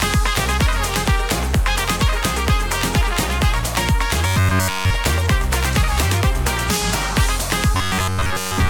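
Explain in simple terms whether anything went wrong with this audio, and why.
Robotic sound from repeated short buffers appears twice: from 4.27 to 4.91 s, where the sound is replaced entirely, and from 7.75 to 8.69 s, where most of it is. The audio turns into a rigid, metallic buzz at about 94 Hz. The likely cause is incoming audio arriving too slowly, so the playback system kept looping the last fragment, roughly 11 ms long, while fresh sound was dropped. That loop rate sets the fixed buzzing pitch.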